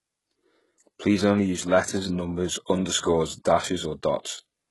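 Throughout, the treble sounds synthetic and stops at 11.5 kHz. S sounds turn gritty and lispy. This is likely heavy HE-AAC compression, fitting a bitrate near 12 kbps.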